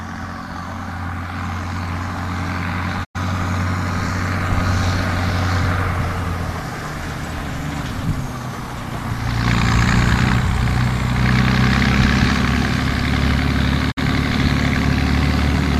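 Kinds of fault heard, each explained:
digital broadcast dropout: The sound fades out over 20 ms into silence at 3.03 s and 13.90 s, then picks up later. The receiver muted over bad frames; the 96 ms and 48 ms holes fit four and two lost frames, and that audio is gone.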